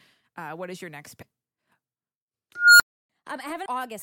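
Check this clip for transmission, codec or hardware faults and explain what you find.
Two kinds of fault are present: compressed frames skipped, at two points, and one unstable filter.

Compressed frames skipped, from 1.21 to 1.23 s just after "what is your next", and again at 3.65 s. The decoder never plays a run of compressed frames, so the audio jumps forward. The first jump loses about 300 ms and the second about 200 ms, which is consistent with roughly ten frames of 23.2 ms. Because neighbouring frames overlap, each join comes out as a short smeared blip. A packet-loss dropout would leave a silent gap, and a sample-level glitch would leave a sharp click. Here the signal simply resumes further on.

Unstable filter, from 2.55 to 3.10 s. A recursive filter has received coefficients that put it outside its stable range, so its output feeds back and keeps growing. A tone at roughly 1.5 kHz swells over about 250 ms until it clips. 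The arithmetic then overflows and the output cuts to silence for about 0.3 s. Acoustic feedback howl also climbs, but it hangs at a steady ceiling. This one ends in an abrupt dead stop.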